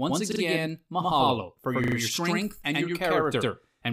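The clip is speech, and it has a channel delay (doubling) throughout. One channel runs about 93 ms late, which fits a 4096-sample buffer. With both channels summed to mono, every syllable is followed by a distinct slap copy at equal level. Two repeated buffer faults also occur. At 0.32 to 0.40 s, a 40 ms piece plays twice more. At 1.84 to 1.96 s, it plays three more times. Each repeat has a hard join, heard as a short stutter. The following audio resumes without an audible gap.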